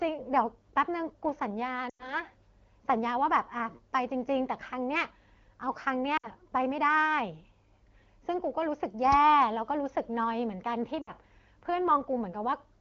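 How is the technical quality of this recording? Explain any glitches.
Three short glitches break up the speech; the wideband coding itself sounds clear, which fits a rate around 12.65 kbit/s. Lost AMR speech frames occur at 1.89–2.15 s, 6.17–6.28 s and 11.02–11.11 s. The decoder repeats its last pitch and vocal-tract settings with falling gain, so the sound smears and fades. A spectrogram shows frozen harmonics thinning into a gap.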